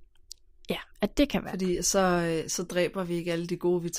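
Two devices likely running on separate, unsynchronised clocks, about 40 parts per million apart, force a one-sample slip roughly every 0.7 s. The result is clock slip clicks: around seven faint, evenly spaced ticks in the speech from 0.14 s to 3.86 s.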